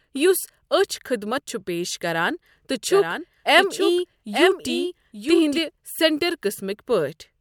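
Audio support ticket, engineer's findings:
Doubled audio track, 2.90 to 5.58 s. Likely a second capture path or edit holding a copy about 1 s late. Full-band duplicate about 5 dB down, dry, no decay; cuts in and out abruptly.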